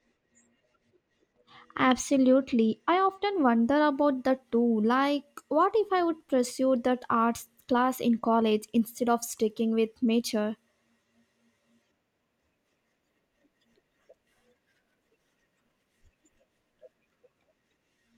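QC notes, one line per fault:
0.00–3.34 s, channel delay (comb filtering): the speech sounds dull at the top until "wonder about that too". One channel runs about two samples late, so the mono sum cancels the highs, with the first notch near 10 kHz.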